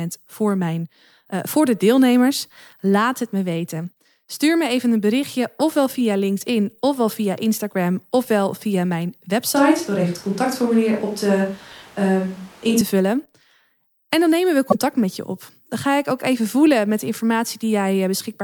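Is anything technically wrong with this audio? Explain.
Yes, there are two faults in this speech recording.

From 9.56 to 12.81 s the sound abruptly turns roomy and hollow, with thinner bass, then snaps back. This is likely a switch to a distant microphone after the close microphone's feed dropped out. Level barely changes, but room noise rises to roughly 30 dB below the speech.

From 14.67 to 14.75 s there is a brief glitch. This is damaged data in a compressed stream: the decoder misread corrupted frames, lost sync and jumped ahead to the next valid frame header.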